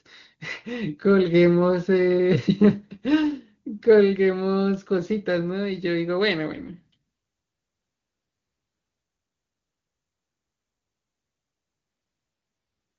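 A speech clip carried over AMR-WB (HD Voice), where the voice is clear apart from an AMR rate drop between 6.53 and 6.96 s. For that stretch the voice turns rough, raspy and synthetic, which fits the codec being pushed from 23.85 down to about 6.6 kbit/s. Unlike packet loss or a switch to narrowband, there is no gap and the band stays the same. Only the texture degrades, and it clears when the rate recovers.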